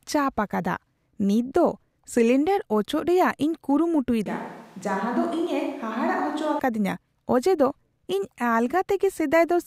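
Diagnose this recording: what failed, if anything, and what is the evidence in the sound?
From 4.26 s to 6.59 s the speech turns roomy and hollow at once, loses low end, drops about 5 dB, and carries a room-noise bed roughly 30 dB below the speech. At 6.59 s it snaps back just as abruptly. This points to the capture stage, most likely a switch to a distant microphone. The close mic's feed went missing, and a farther pickup filled in, hearing more reflections and ambient noise.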